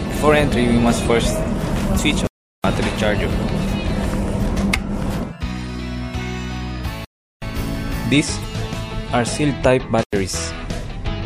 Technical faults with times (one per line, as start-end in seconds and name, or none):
1.95-1.99 damaged data in a compressed stream
2.27-2.64 block of digital silence
5.16-5.20 damaged data in a compressed stream
7.05-7.42 block of digital silence
8.40-8.44 damaged data in a compressed stream
10.03-10.13 block of digital silence